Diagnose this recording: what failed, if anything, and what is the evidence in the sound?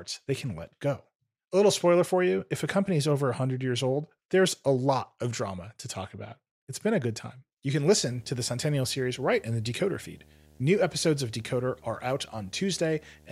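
The speech picks up video or display buzz from 7.85 s right through to the end: a steady 75 Hz buzz with hash on top, sitting roughly 30 dB under the speech. That's analogue wiring, with a monitor or video cable running at a 75 Hz field rate coupling into the audio path.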